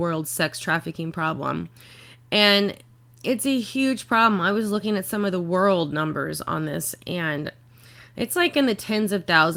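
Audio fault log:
Nothing to log here; I didn't catch a single fault anywhere in this bit of speech.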